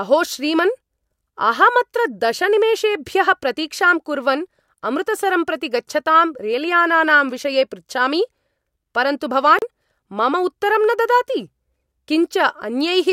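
At 9.59 to 9.62 s the speech drops into a 33 ms silence, a gap at a join of encoded pieces. Encoder delay and end padding were left in, giving smeared edges before the speech resumes.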